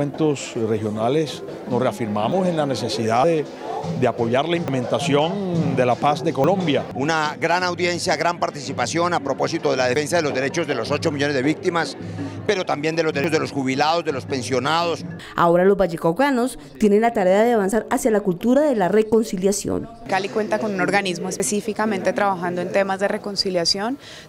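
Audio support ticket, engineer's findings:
Forward skips at 2.32, 3.24, 4.68, 6.44, 9.96, 13.24, 17.72, 21.4 s; no gap, unlike dropout. Each loses 40–100 ms. Likely dropped buffer (overrun), capture side.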